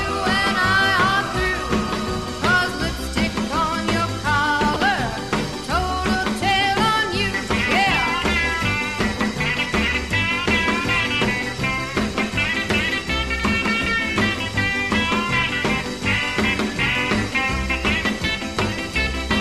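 Damaged compressed data reached the decoder and was played anyway, a corrupt frame decoded from about 4.74 to 4.77 s. Across roughly two frames, misread values push energy into the wrong frequencies, giving a brief chirp, squeak, blip or burst of noise peaking near -10 dBFS.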